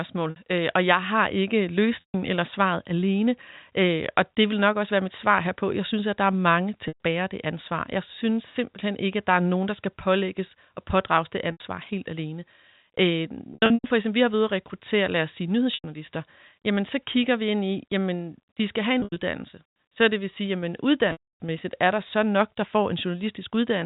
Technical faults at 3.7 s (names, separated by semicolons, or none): none